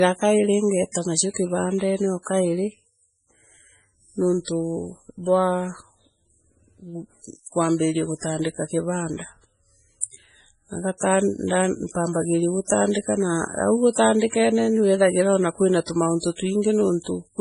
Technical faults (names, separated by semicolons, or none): MP3 compression; pre-echo